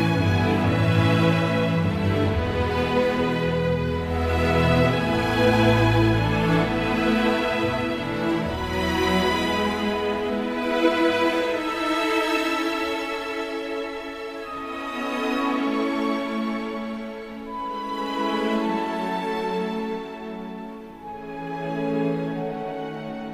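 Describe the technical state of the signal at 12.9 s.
At 12.9 s the signal is intact, with no dropout, distortion, clipping or other audible fault.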